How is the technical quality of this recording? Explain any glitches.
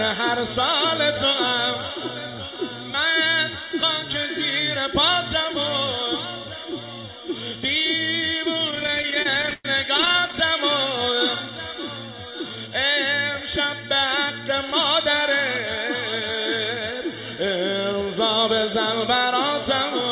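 The recording has one clear glitch, a burst of repeated stalls (stutter). It comes through a narrowband call path with nothing above 4 kHz, which fits G.711 mu-law at 64 kbps.

From 8.68 to 10.34 s, the audio keeps catching. There are about thirty short stalls, the longest 112 ms. The jitter buffer ran dry repeatedly, so the receiver stretched the last sound to fill 417 ms, a quarter of that stretch. Nothing is lost, but the audio drags and stutters.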